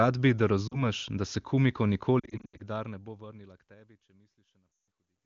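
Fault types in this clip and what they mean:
Lost AMR speech frames: corrupted frames get patched by the decoder replaying the last good pitch and vocal tract settings at falling gain. Here it's a brief 40 ms dropout near 0.67 s, scattered dropouts from 2.19 to 2.61 s, and a 160 ms dropout that falls to near silence at 4.76 s.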